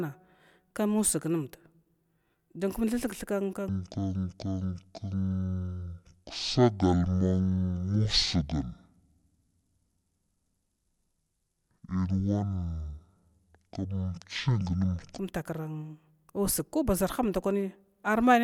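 Speech clip with a section at the wrong speed from 3.69 to 15.19 s. It plays at half speed, roughly ten semitones lower, likely from a wrong playback clock.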